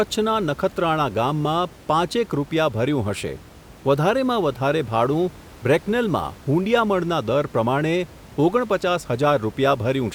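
This is a speech recording with nothing technically wrong, and the room noise sits about 23 dB below the speech as part of the recording.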